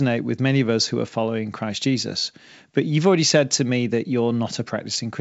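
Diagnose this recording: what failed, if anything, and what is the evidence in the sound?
No faults detected.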